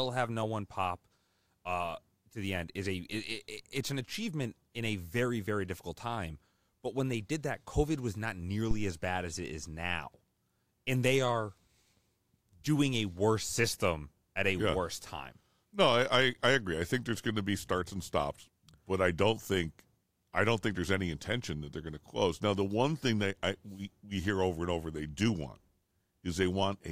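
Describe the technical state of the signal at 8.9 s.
At 8.9 s there is a phantom power thump, 8.71 to 8.97 s. A supply switched on or off on the live input sends a voltage step through the coupling capacitors, producing a deep thud peaking at about -19 dBFS that decays within 58 ms. Unlike a plosive pop, it carries no breath.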